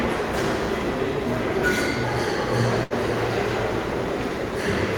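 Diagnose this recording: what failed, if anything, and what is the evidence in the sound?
A burst of packet loss on the network path: consecutive packets failed to arrive in time between 2.83 and 2.93 s. The receiver extended the last sound for 69 ms, fading it into a held tail, then resumed with 60 ms of audio skipped.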